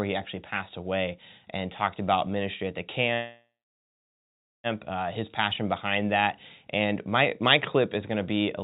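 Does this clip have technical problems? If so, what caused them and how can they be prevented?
Yes. From 3.14 to 4.67 s there is a call audio freeze: the sound trails off into a fading fill and then about 1.2 s of silence, after which the speech resumes where it stopped, with nothing lost but a 1.5 s delay added. This is likely caused by packets held up in transit, draining the jitter buffer. Preventing it means improving network stability or allowing a deeper adaptive jitter buffer.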